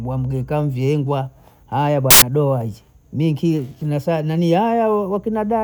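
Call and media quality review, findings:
Samples built from the wrong bytes, 2.11–2.22 s, between "mvyeengwa aya" and "boazi minki kinyasaa nanii". Burst of loud, harsh broadband noise, about 0.11 s. Decoder misassembling sample bytes (offset, swapped order or misalignment), so fast-changing low bits dominate each value.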